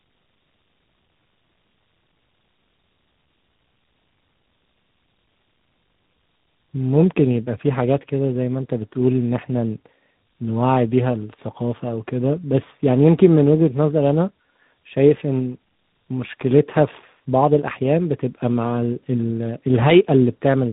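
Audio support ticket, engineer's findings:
Tandem speech coding, full length of the speech: rough, muffled, warbly texture. Likely G.729A then G.726 across links with a G.711 A-law hop between, each coder re-encoding the previous one's errors. Spectrogram: hard ceiling at 3.8 kHz, smeared, blotchy harmonics.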